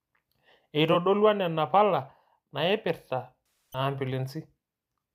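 A brief smeared, noisy patch sits at 0.92 to 0.96 s. From 3.53 to 3.79 s the sound thins out and fades toward silence before returning. Both are AAC frame loss with concealment: the decoder lost coded frames and filled the gap from the last good spectrum. The first gap of about 21 ms fits a single lost frame. The second, about 256 ms, fits roughly twelve, long enough for the concealment to fade out.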